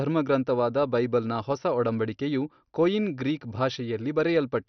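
MP2 compression runs throughout the speech: the sound is dull, with nothing above 6.2 kHz, and carries a heavy gurgling, granular grain. That likely comes from MPEG Layer II starving its sub-bands of bits, switching upper bands off and coarsely quantising the rest, which fits a low rate near 48 kbps.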